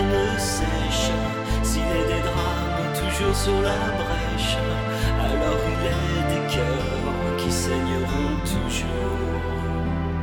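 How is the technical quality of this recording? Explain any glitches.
No glitches can be heard anywhere in the recording, so there is nothing to explain.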